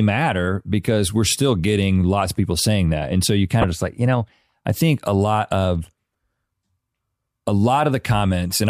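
At 3.61 to 3.64 s, and again at 6.12 to 6.14 s, the speech breaks into a brief glitch: damaged data in a compressed stream. Corrupted bytes make the decoder misread the frames and resynchronise on a later header. Each burst lasts a few tens of milliseconds.

Between 4.14 and 4.84 s come CD scratch ticks: six evenly spaced ticks, roughly seven per second, the longest only a couple of milliseconds long. A disc blemish passing under the laser once per revolution defeats the error correction, so the player patches or mutes those samples. The steady rhythm separates them from random crackle.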